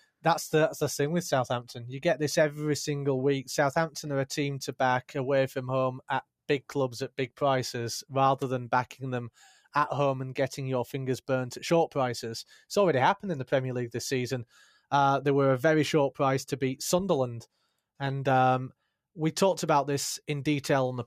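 From 14.47 to 14.85 s, the sound is cut by the noise suppressor. The suppressor mistook this part of the sound for background noise and turned it down harder than everything around it. The level sinks by up to about 16 dB, over roughly a third of a second in total. It sounds like a brief dip, as if the sound pulls away and then returns.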